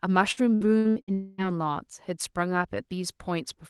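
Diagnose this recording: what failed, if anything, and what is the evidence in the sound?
The network repeatedly dropped packets from 0.31 to 1.11 s. Five gaps, the longest 60 ms, were patched by extending prior sound, making it choppy.

From 1.14 to 1.52 s a long network dropout is the likely cause. The concealment stretches the last sound as a fading buzz or hiss, never falling silent, and the lost audio never returns.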